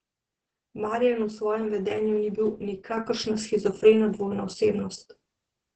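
Speech run through heavy Opus voice compression the whole way: SILK-style coding cuts everything above about 8.7 kHz, and the sound is muffled and hoarse, consistent with roughly 10 kbps. At 2.97 s there's a sudden gain jump of about 6 dB, with speech and background stepping up together and staying there, likely a gain change applied without a ramp.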